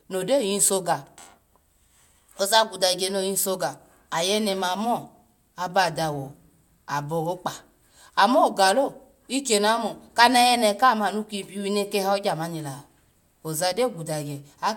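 No technical faults can be heard anywhere in the recording, and the signal stays steady and intact throughout.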